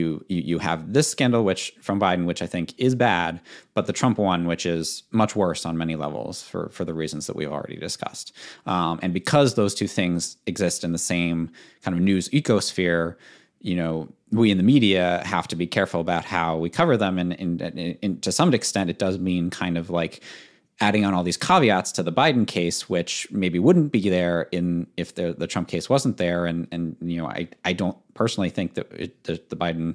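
Speech recording with no audible technical faults.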